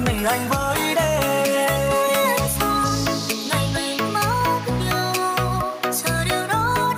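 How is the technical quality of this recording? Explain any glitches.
Nothing glitchy turns up here at all; the recording runs without any dropouts, clicks or other hiccups worth pointing out.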